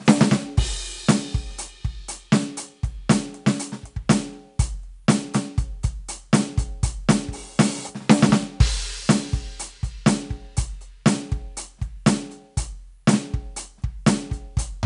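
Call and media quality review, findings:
4-bit ADPCM compression, throughout the music. Gritty hiss rides every loud passage, plainly audible, with roughness on sharp attacks where the step size lags. Nothing above 10.6 kHz, which fits a 22 kHz sample rate at about 88 kbps.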